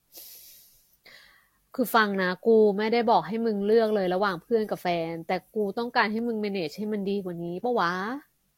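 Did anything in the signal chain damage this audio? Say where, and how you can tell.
Yes. At the codec stage, the whole clip keeps the lowest cut-off of the chain, and two layers of compression artefacts sit together. That layering is what separates this from a single low-bitrate encode. It is likely transcoding between lossy codecs, an HE-AAC encode re-encoded as Vorbis.

At the driver or buffer stage, there are sharp single clicks at 1.19, 3.69, 4.71 and 6.19 s, each a thin vertical line in the spectrum. This points to dropped samples, likely a tiny fraction of a millisecond lost each time. Unlike a dropout, no sound goes missing, only a jump in the waveform.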